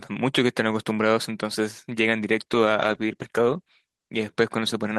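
From 2.47 to 4.19 s, a call bitrate drop makes speech rough and muffled. The coarser coding fits a fall from 32 to 14 kbps.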